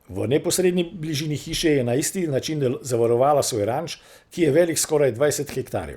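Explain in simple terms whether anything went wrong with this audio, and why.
Nothing went wrong; no technical problems can be heard.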